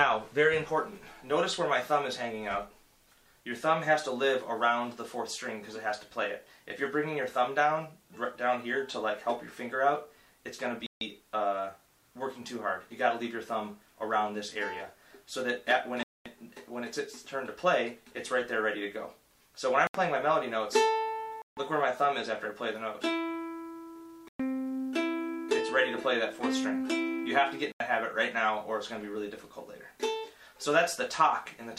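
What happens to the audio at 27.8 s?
A Bluetooth stall runs from 27.72 to 27.80 s, where the audio cuts to about 82 ms of silence and then resumes. The likely cause is interference delaying packets, so the headphone buffer emptied and playback paused until the resent data arrived.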